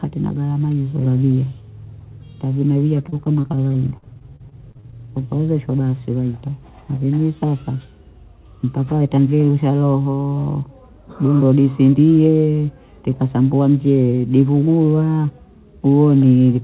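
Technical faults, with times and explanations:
3.06–4.94 s, repeated packet loss (robotic sound): the speech turns choppy right up to "ukaozeshwa basi waita", with dropouts arriving one after another, the longest about 44 ms. Each hole gets patched by stretching out the last bit of sound, roughly 420 ms of it in total, while about 300 ms of the speech is simply gone. That repeated patching leaves it choppy with pieces missing, over a band that stops at 4 kHz, which fits a G.711 mu-law call path.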